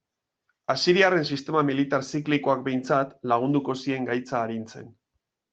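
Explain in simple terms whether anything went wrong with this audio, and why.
Nothing went wrong here: the recording has been squeezed by Opus voice compression, the kind used for internet calls, but it keeps the full range of the sound and the compression leaves only a light mark, so there is no fault to point to.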